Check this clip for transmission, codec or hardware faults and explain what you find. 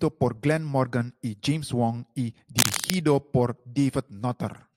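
One hardware fault here. From 2.58 to 2.94 s there's cable scratch noise, a burst of dense, ragged crackle roughly as loud as the speech, likely a worn cable or connector shifting as its contact resistance jumps around.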